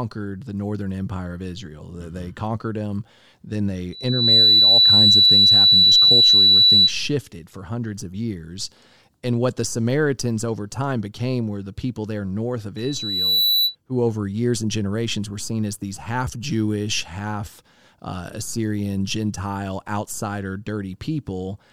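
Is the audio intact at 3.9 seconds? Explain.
No. From 3.92 s to 6.93 s a loudspeaker feedback squeal swells within a fraction of a second into a steady 4 kHz tone, around 15 dB above the speech. A microphone was picking up its own loudspeaker, and at that frequency the loop gain exceeded one, so the tone fed itself.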